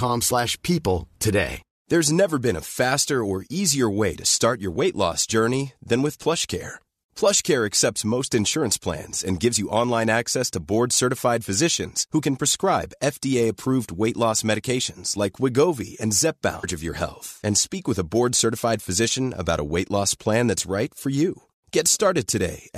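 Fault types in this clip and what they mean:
Stream segment skipped: At 16.63 s the speech jumps abruptly forward with a brief blip, picking up at "of your health and". A chunk of the programme is missing. The likely cause is one stream segment failing to load, so the player moved on to the next.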